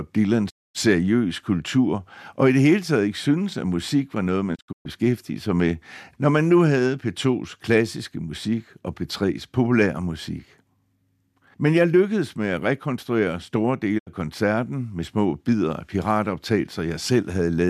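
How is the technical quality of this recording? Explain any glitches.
The recording has three digital broadcast dropouts. In each, the receiver stopped getting valid frames and muted output until good data returned, so the speech fades out over about 20 ms, goes silent, and resumes with the intervening material gone. The first runs from 0.49 to 0.77 s, a single hole of 240 ms. The second, from 4.54 to 4.87 s after "musik var noget man" and before "sig med når man", breaks into several short gaps totalling 216 ms across 288 ms, the longest 120 ms. The third, 13.97 to 14.09 s, between "med at rekonstruere store" and "koncerten med små bidder", loses 72 ms.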